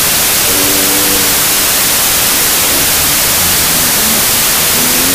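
From start to finish the audio carries a wrong sample width fault, consistent with 32-bit integer data being read as 16-bit. Each original sample is split into two values: one holds the upper bytes and tracks the real waveform, while the other is built from low-order bytes and behaves like loud broadband noise. The result is a harsh hiss with the original buried and distorted beneath it, running at half speed and an octave low.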